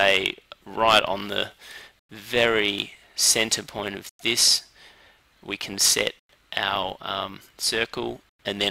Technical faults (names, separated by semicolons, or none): gap between chunks